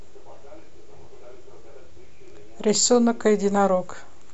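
No technical faults can be heard anywhere in the speech recording.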